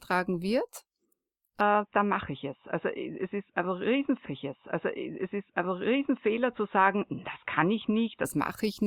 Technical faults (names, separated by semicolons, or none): input switched to a poorer device; stream segment repeated